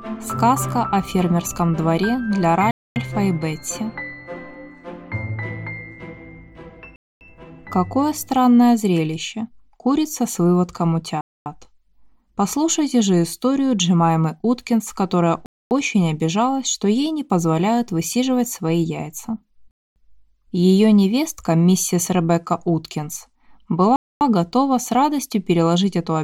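The audio was delivered in 4-second chunks with a gap between chunks: the join left silence instead of continuing. 250 ms holes interrupt the sound at 2.71, 6.96, 11.21, 15.46, 19.71 and 23.96 s, recurring every 4.25 s without losing any material.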